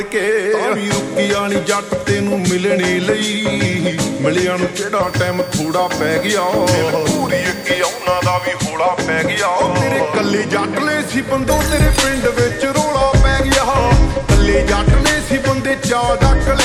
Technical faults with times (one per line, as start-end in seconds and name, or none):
5.03-8.48 switching supply whistle